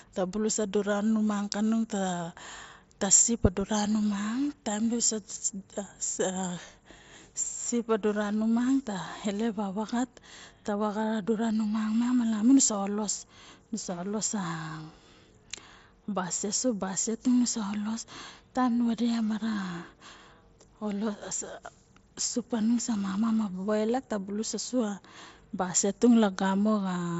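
No faults turn up anywhere in this speech, which simply carries the familiar wideband Bluetooth headset sound of mSBC, with the top end stopping around 8 kHz and only a light touch of that codec's grain on the louder moments.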